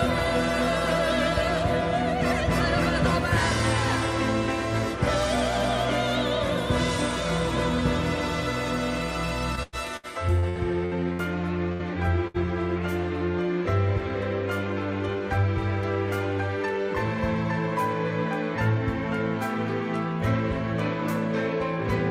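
Between 9.55 and 11.22 s the audio breaks up with repeated packet loss, giving a choppy, robotic sound: seven short holes, the longest about 97 ms, are each patched by stretching out the preceding sound, so about a quarter of that span is concealment and about 300 ms of real material is simply gone. On a spectrogram this shows as a run of smeared, frozen-looking blocks where harmonics run flat instead of moving, interleaved with sudden jumps where the true signal returns. Two further bursts of packet loss follow, at 11.73 to 11.82 s and 12.27 to 12.37 s. In each, roughly 60 ms of audio is lost and bridged by about 70 ms of the last sound held over and fading, so the listener hears a brief buzz or hiss dying away before the sound picks up again further along. In the waveform each appears as a decaying, repetitive patch ending in an abrupt restart, and on a spectrogram as a short horizontal smear that fades before the normal texture resumes.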